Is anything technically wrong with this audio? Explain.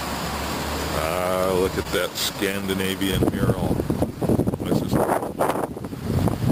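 Yes. From 1.82 to 1.87 s, a brief held, slightly buzzy sound is a short stall from a late packet. The jitter buffer emptied, so about 25 ms was stretched; nothing was lost.

Between 2.33 and 3.14 s, a handful of tiny ticks and smears are scattered short gaps. About five brief losses, each roughly 10 ms or less, were patched by continuing the preceding sound.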